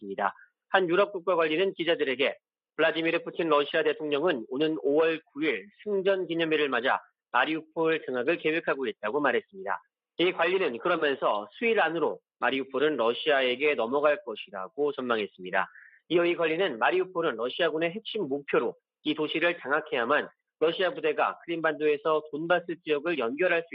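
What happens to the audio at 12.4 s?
Nothing goes wrong at 12.4 s; the audio plays through that moment intact, with no dropout, click, glitch or other fault.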